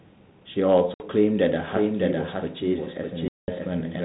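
At 0.94 s the speech drops into a hard-edged hole of silence. This is packet loss on an ADPCM call: about 60 ms of audio is missing, which fits roughly three packets. Because the decoder's adaptive predictor and step size lose track of the sender's during the gap, the speech comes back at about 1.08 s slightly distorted. It settles within a few tens of milliseconds.

From 1.68 s to the end, a doubled audio track appears. A second, full-band copy of the same speech runs about 0.7 s behind the original, at about 5 dB lower. It starts abruptly and has no decay or room colour, so it sounds like a flat overlapping repeat rather than an echo. The likely cause is the audio being captured a second time through a slower path.

At 3.28 s a longer dropout of the same packet-loss type cuts out about 200 ms, roughly ten packets' worth, through to 3.51 s. The return again brings a short stretch of slightly distorted sound while the decoder resynchronises.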